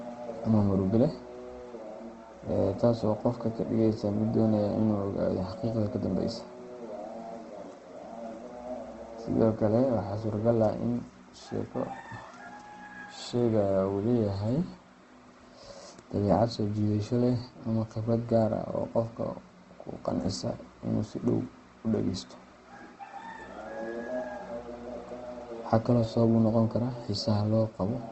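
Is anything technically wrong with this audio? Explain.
Yes. Opus compression damage is plainly audible across the whole speech clip. The grainy, rough texture is likely from Opus in its music mode at a low bitrate, which fits about 16 kbps. Starved of bits, the encoder keeps each band's energy but fills the detail with folded copies of lower bands or noise, so tonal parts of the speech turn noisy and coarse instead of hollow. A spectrogram shows a hard ceiling with nothing above 8.2 kHz, and smeared, noise-like fill where harmonics should be.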